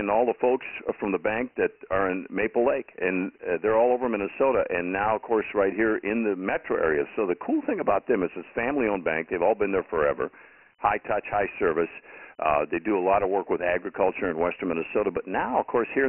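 Throughout the speech there's Dialogic VOX ADPCM damage: nothing above 3 kHz, which fits 6,000-per-second 4-bit coding, and heavy gritty hiss riding each syllable.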